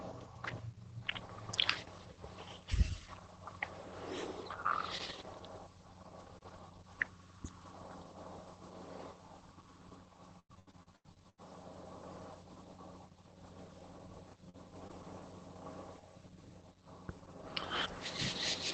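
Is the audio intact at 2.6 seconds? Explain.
Yes, the speech at 2.6 s is intact, with no dropout, glitch or other fault at that moment.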